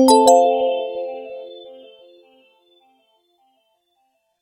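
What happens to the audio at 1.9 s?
At 1.9 s the channels are drifting apart, as they do across the whole clip. The two sides run on clocks roughly 200 ppm apart, so their offset slides toward about a millisecond. Summed, this sweeps comb notches slowly, heard as slow flanging.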